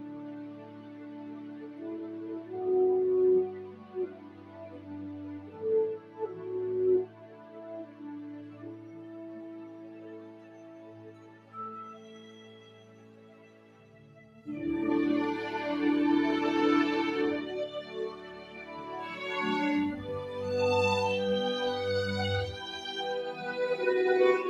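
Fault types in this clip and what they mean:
Noise suppressor applied to music or sounds: a speech-tuned suppressor was left running on material it doesn't understand. It treats steady, sustained parts and decaying tails as if they were background noise and pulls them down, while sharp onsets slip through. Across the whole clip the gain keeps swinging by something like 15 dB, so the sound pumps and thins out instead of holding a steady level.
Sound cut by the noise suppressor: these are the specific stretches where the suppressor clamped down harder than usual, each dipping by up to about 4 dB. It happens at 0 to 1.81 s, 3.49 to 4.54, 4.76 to 5.51, 6.01 to 6.17, 7.07 to 7.56, 8.19 to 11.52, 11.98 to 14.41 and 18.16 to 18.53 s. The longest sag is the one from 8.19 to 11.52 s.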